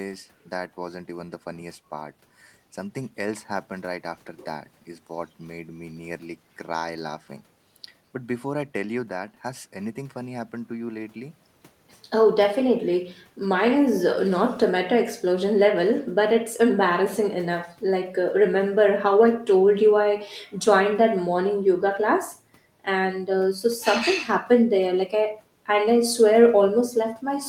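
No technical faults can be heard anywhere in the recording.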